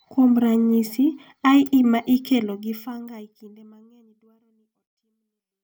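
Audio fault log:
No faults are present, and the speech level tapers smoothly to silence from around two and a half seconds to the end at 5.64 s, with no hard edge or click.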